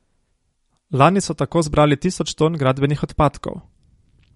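From start to finish the speech carries likely MP3 compression at a low bitrate, around 48 kbps: nothing survives above 11.2 kHz, and weak detail swirls and warbles.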